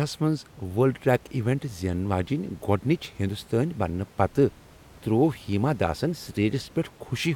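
No technical faults can be heard in the speech, with only the room's own background noise sitting about 26 dB below it.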